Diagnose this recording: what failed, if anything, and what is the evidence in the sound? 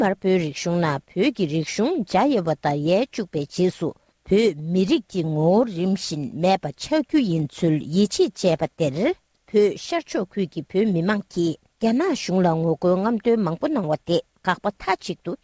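Nothing failed: the only trace is that of a working call path, a band that stops at 8 kHz, which fits a G.722 wideband link, and no event in the sound points to a broken stage.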